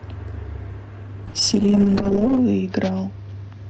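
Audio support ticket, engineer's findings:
Call bitrate drop, 1.27 s to end: sound turns rough and watery, worst for about 1.1 s, fitting an Opus encoder squeezed from 32 to 7 kbps after a bandwidth-estimate fall.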